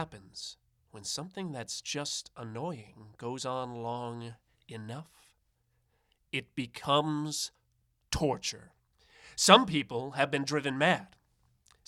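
No technical faults can be heard anywhere in this speech recording. Nothing in it calls for comment on technical grounds.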